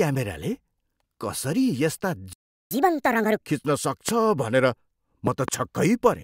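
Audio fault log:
2.33–2.71 s, playback stall: the speech just cuts out mid-flow for about 375 ms of dead silence, then picks up again. That's the output going empty, most likely because the player ran dry of data or its thread got blocked for a moment.
2.71–3.46 s, catch-up at higher speed: right after the gap, the speech runs at 1.5 times normal speed, so everything sounds hurried and pitched up by roughly seven semitones. The player is resampling to burn through its backlog and win back the lost time, then it settles back to normal.
4.09–4.11 s and 5.27–5.50 s, loud pop: a single sharp pop at 4.09 s, about 15 dB above the speech, then a pair of pops in quick succession starting at 5.27 s, peaking about 20 dB above it. The speech carries on underneath each time. These are likely voltage steps or pulses from a switch, static or a driver glitch, shaped by the circuitry after them into short pops.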